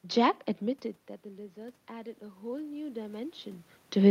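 A speech clip with automatic gain rising from 1.54 to 3.43 s. The level at the microphone falls by about 18 dB. The gain control slowly adds about 8 dB to compensate. Voice and room noise swell together, unlike the talker's own movements near 0.5 and 3.5 s.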